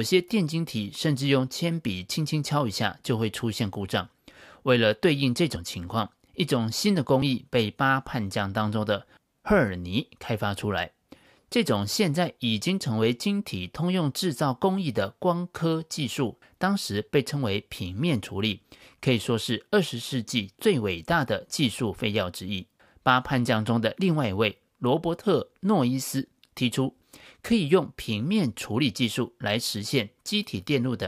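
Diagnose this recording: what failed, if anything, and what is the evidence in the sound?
At 7.22 s the speech jumps ahead: a short stretch, around 20 ms, just isn't there, and the two sides butt straight together with no gap of silence between them. That points to the driver or buffer stage, most likely a dropped buffer (overrun). The capture software didn't fetch its block of samples in time, the hardware wrote over it, and the stream carried on from the next block, so the sound skips rather than pauses.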